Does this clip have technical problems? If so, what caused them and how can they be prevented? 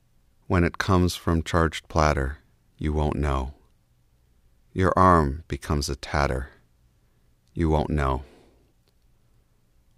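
No, nothing in this clip points to a technical fault, so there is no cause to trace and nothing to prevent.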